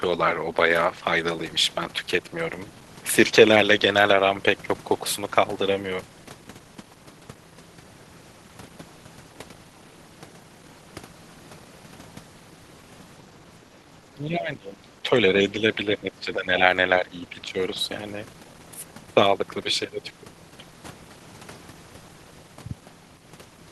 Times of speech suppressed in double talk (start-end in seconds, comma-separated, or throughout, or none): 14.14-15.11, 15.37-16.61, 17.01-17.57